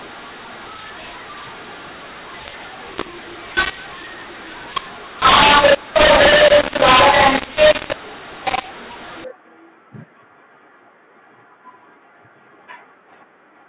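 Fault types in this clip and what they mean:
mu-law and A-law mixed up: From 0.0 to 9.24 s, speech coded as A-law is decoded as mu-law, so each sample's level is misread. Loud and soft parts come out wrongly scaled, the speech turns harsh and distorted, and pauses fill with noise.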